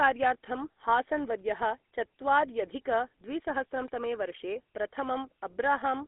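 Throughout, the speech passes through a GSM full-rate codec, which fits 13 kbps coding. Its pulse-driven excitation leaves a buzzy, gravelly roughness, confined to roughly 250 Hz to 3.6 kHz. At 0.72 s, one lost GSM frame is filled by repeating the previous frame, giving a brief metallic ring just before "हासन् वर्यः चत्वार्यधिक".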